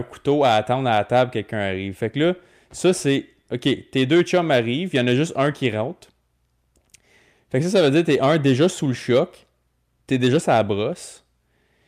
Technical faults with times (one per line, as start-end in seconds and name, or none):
none